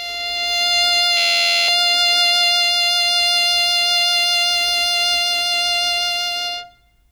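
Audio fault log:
1.17–1.68 s: system hang loop. The system stalled while the hardware kept replaying one 11.6 ms piece of its ring buffer 44 times, giving a steady 86.1 Hz buzz. The loop length fits a 512-sample buffer. About half a second of music is lost.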